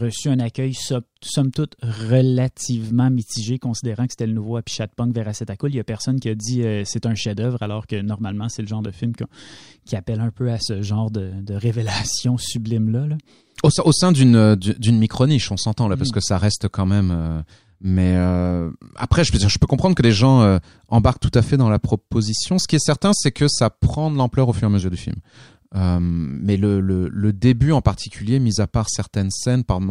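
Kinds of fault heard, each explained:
No technical fault can be heard in the recording; the signal stays continuous and steady throughout, with nothing in its level, timing or frequency content that points to a problem in the recording or playback chain.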